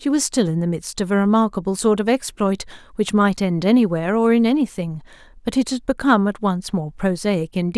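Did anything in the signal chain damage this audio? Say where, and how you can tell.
No, nothing in the signal chain damaged this audio.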